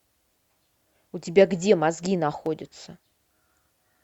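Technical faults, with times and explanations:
2.46 s, electrical switching spike: a nearby switch, motor or static discharge likely threw off a brief arc, and the audio line picked up that burst of interference. It sounds like a sharp snap lasting only a few milliseconds, peaking at about -25 dBFS and sitting on top of the speech rather than replacing it, because the stray energy was added to the signal, not cut into it.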